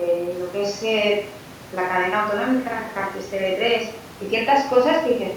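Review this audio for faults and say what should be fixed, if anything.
No faults can be heard anywhere in the speech. Nothing needs to be fixed.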